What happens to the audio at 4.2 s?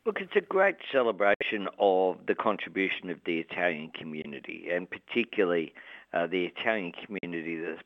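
At 4.22 s the sound cuts out and returns at 4.26 s. This short silent gap is likely a Bluetooth dropout. A packet never reached the headphones in time, so about 21 ms of audio went missing. That fits one lost frame. Playback then resumes further along, as though it had kept running.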